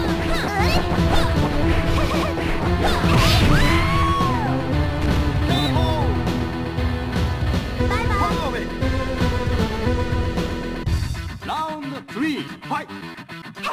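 No technical fault can be heard anywhere in this audio. There is nothing to point to at any moment, so no time or cause applies.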